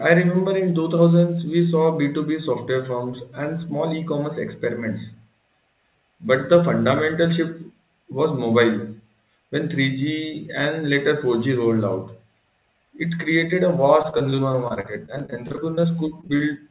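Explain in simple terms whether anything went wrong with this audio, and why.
From 14.02 to 15.85 s, just after "it created a", repeated packet loss (robotic sound) makes the speech choppy. Eighteen small holes are patched one after another, so it's a sustained stutter, not one glitch. Near the end, short concealed packet loss appears three times, at 16.21–16.25, 16.27–16.31 and 16.37–16.41 s. Each is a smear or wobble of about 20 ms, too brief to sound robotic. Through the phone-style call path, nothing is heard above 4 kHz.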